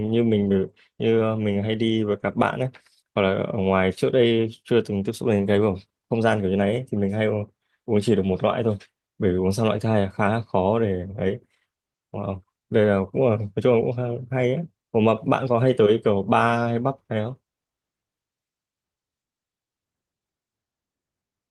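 No technical faults can be heard anywhere in this recording.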